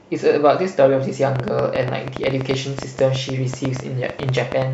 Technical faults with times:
1.36-4.63 train of clicks

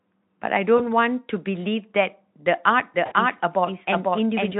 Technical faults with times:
0.77-0.82 VoIP packet loss concealed by the speech codec
2.94-4.60 doubled audio track
3.05-3.14 VoIP packet loss concealed by the speech codec

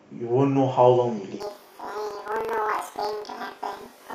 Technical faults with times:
1.40-4.14 planar audio read as interleaved

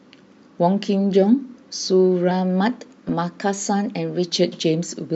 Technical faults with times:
2.31-4.24 drift correction step
3.08 corrupt frame decoded

